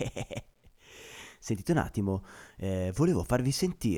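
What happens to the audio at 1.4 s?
Low bit depth without dither runs through the whole clip, including 1.4 s. The speech is grainy, with distortion that shifts with the signal and sits roughly 45 dB below it. This is likely 10-bit truncation with no dither.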